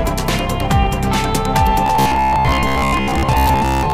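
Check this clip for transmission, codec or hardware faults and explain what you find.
Robotic sound from repeated short buffers appears from 1.86 s to the end. Audio likely arrives too slowly, so playback keeps repeating a fragment of about 15 ms for most of that stretch, which imposes a rigid 66.7 Hz metallic buzz on the sound.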